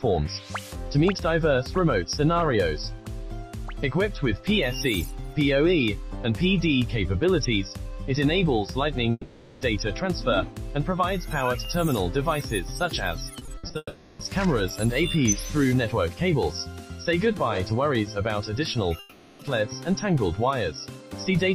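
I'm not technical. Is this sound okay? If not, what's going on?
No, there are a few spots where the sound breaks up.

At 9.11 to 9.63 s, 13.77 to 14.21 s and 18.99 to 19.41 s you'll hear a long network dropout: the sound smears into a fading buzz for roughly half a second (a bit less on the later two), then picks up again with that chunk simply gone. That's likely the connection stalling, with the player stretching out the last bit of sound to cover the hole.

Just before the second of those, from 13.39 to 13.75 s, there's repeated packet loss (robotic sound). Five small holes, the longest about 60 ms, come in quick succession, and each one gets patched over. Close to 40% of that stretch is patch rather than real sound, so it comes out choppy.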